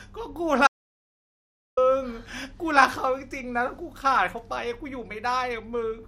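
Audio dropout to silence at 0.67–1.77 s: the speech cuts to dead digital silence for 1.1 s, likely from input lost while recording continued.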